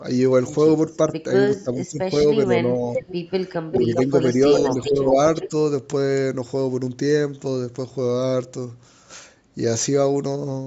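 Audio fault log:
throughout, block size mismatch (truncated): There's a steady buzz at 43.1 Hz under the whole clip. That rate fits one stage handing over 1024-sample blocks while the next reads slightly fewer and drops each block's tail, so every seam leaves a tiny click and the clicks line up into a tone. Tempo and pitch sound essentially normal because so little is thrown away per block that the speed change is negligible.
0.92 to 0.96 s, 2.94 to 3.15 s, 3.52 to 5.49 s, echo leak: Each of these carries a delayed copy of the speech. The first is a brief scrap about 422 ms late and very faint, at roughly 40 dB down. The later two arrive 402 ms late and are strong, only about 5 dB under the speech, with the last running nearly two seconds. It's likely the far end's echo canceller not fully removing what its microphone caught from the loudspeaker, so that sound got sent back.
1.63 to 2.96 s, 3.69 to 4.35 s, 4.75 to 5.18 s, speech suppressed in double talk: In these stretches the speech dips and chops while the other side is also active. 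The first span is the worst, with drops of around 15 dB adding up to roughly 0.7 s of lost level. The other two dip by about 10 dB for around 0.2 s and 0.3 s. This is likely the canceller failing to tell the local talker from the echo and ducking both.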